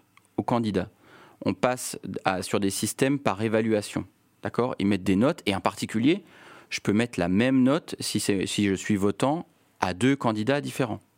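A speech recording with nothing technically wrong anywhere in the signal.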